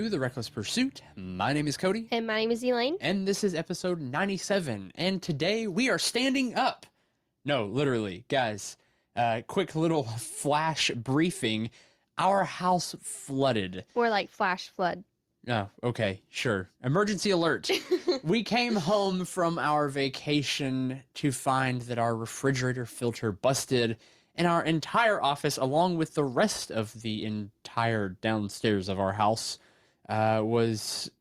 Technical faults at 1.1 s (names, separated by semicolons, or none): none